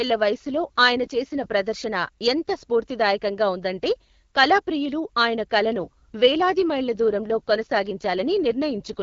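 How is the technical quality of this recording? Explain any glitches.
The speech is coded as AMR-WB HD Voice, with light codec roughness throughout, and twice it slips into an AMR rate drop. From 0.39 to 1.54 s, and again from 5.83 s after "ఉందంటే కళాప్రియులు ఆయన కళను" to the end, the voice turns rougher and more synthetic. It sounds like the network pushing the codec down from around 12.65 to 8.85 kbit/s to spend bits on error protection. The band stays the same and there's no gap.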